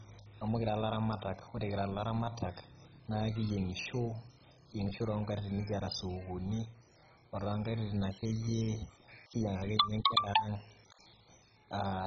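All the way through, the speech sounds dull and gurgly with nothing above 7.5 kHz, most likely heavy MP2 compression at a very low bitrate starving and switching off the upper bands.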